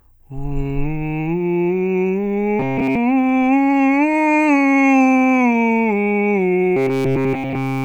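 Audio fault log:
2.60–2.98 s and 6.77–7.84 s: robotic sound from repeated short buffers. The music collapses into a rigid metallic buzz at 134 Hz, most of the first span and completely in the last. This is likely from a roughly 7.5 ms slice being looped while fresh audio was skipped. On a spectrogram, flat harmonics sit at multiples of 134 Hz, and the waveform shows identical cycles.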